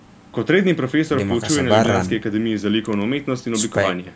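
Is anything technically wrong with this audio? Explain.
No, there are no technical faults.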